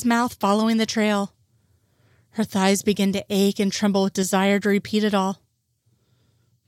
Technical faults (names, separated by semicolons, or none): none